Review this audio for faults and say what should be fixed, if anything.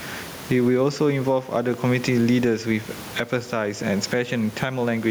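Gain pumping runs through the whole speech clip. The room noise, about 29 dB below the speech, is a normal part of the recording. The gain swings by around 15 dB. The likely cause is input gain set far too high, with a fast limiter clamping each peak. To prevent it, lower the microphone gain and ease off the limiting.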